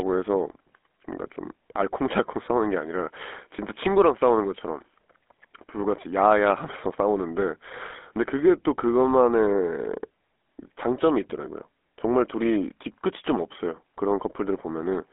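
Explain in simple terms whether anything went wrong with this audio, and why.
Yes, something's off, and it runs through the whole recording. The speech has been squeezed through the GSM full-rate codec, the old mobile phone one. It rebuilds the voice from a rough model driven by regular pulses, which gives that buzzy, gravelly edge you can plainly hear. It also throws away everything above about 3.8 kHz, and the line only really carries roughly 250 Hz to 3.5 kHz, so the voice sounds thin and phone-like.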